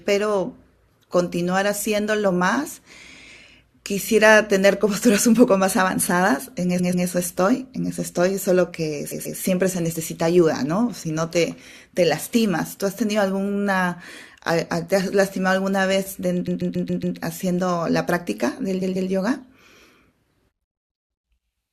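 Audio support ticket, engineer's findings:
Stutter, same short chunk of speech looping: 6.78–7.06 s, 9.10–9.38 s, 18.81–19.09 s (block of about 139 ms played twice more, adding 0.28 s each); 16.47–17.16 s (same block played five more times, adding 0.70 s). Repeated frames in the encoded stream, with the decoder replaying a compressed run that was written or sent more than once. The block length fits six frames of about 23 ms. Suspect the packetiser or writer re-emitting frames.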